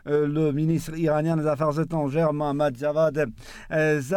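No technical faults can be heard anywhere in the signal.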